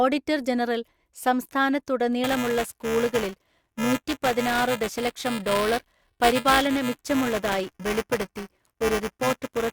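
From 2.24 s to the end of the clip, the program filling the playback ring buffer and the hardware draining it have drifted out of step, so their positions cross inside every period: buffer tearing. A small slice of each buffer still holds speech from roughly 10 ms earlier, spliced in with hard joins on both sides. Those joins repeat at 375 Hz, which fits a 128-sample buffer, and produce a steady robotic buzz riding on the speech that falls away whenever the signal stops.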